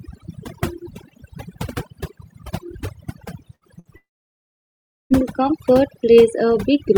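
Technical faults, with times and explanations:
Throughout: overdone noise removal. The background sits near silent with twinkling specks, because quiet bands were cut along with the noise.
3.55–3.64 s and 3.79–3.88 s: burst of packet loss. In each, the last sound is held briefly and fades, then speech resumes with about 60 ms missing.
3.97–5.13 s: long network dropout, likely. The sound is briefly extended, then about 1.07 s of silence follows, and speech returns with over a second lost.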